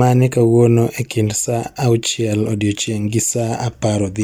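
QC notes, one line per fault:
No faults found in this speech clip.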